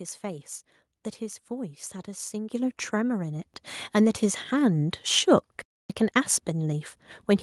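At 2.52 s and again at 3.54 s the speech jumps louder, by about 8 dB and then about 4 dB, the microphone volume stepped up as the input level was raised. Unlike a compressor or gate, voice and background rise together and stay raised. From 5.62 to 5.90 s the speech drops out for about 280 ms, then resumes. This is a playback stall, likely the player starving for data, heard as true silence rather than the noise or repeated fragments of packet loss.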